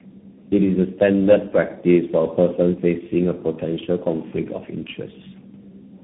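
Throughout the speech, the call passes through several speech codecs in turn, likely three, which fits two AMR-NB stages and a final CVSD stage. This is tandem speech coding: each stage recodes the previous stage's errors. The sound comes out rough, muffled and warbly, with nothing above 3.8 kHz.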